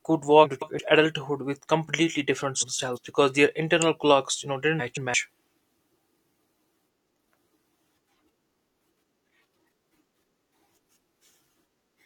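Frames out of order: at 0.44–0.79 s, 2.61–2.98 s, 4.79–5.14 s and 6.25–6.59 s, two adjacent blocks of about 170 ms each were decoded in swapped sequence. Each stretch of speech plays with its halves exchanged, a garbled flutter, and no time is lost.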